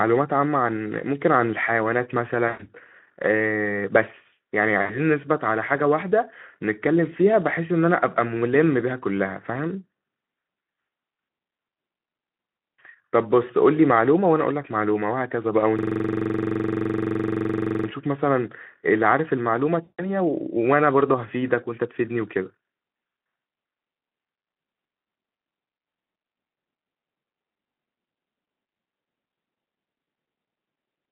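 VoIP packet loss concealed by the speech codec occurs at 2.48 to 2.68 s, 4.81 to 5.04 s and 19.82 to 20.12 s. About 120, 80 and 160 ms of audio go missing. That fits six, four and eight 20 ms frames. The decoder stretches the last sound it had into a buzzy tone or a coloured noise that fades. The sound stays weak briefly after each gap.

A system hang loop runs from 15.79 to 17.88 s. One 42.67 ms piece of audio repeats about fifty times, which fits a 2048-sample buffer. It cycles at 23.4 Hz, giving a rough, rapid stutter close to a buzz. The speech is coded with narrowband Speex throughout, with light codec damage.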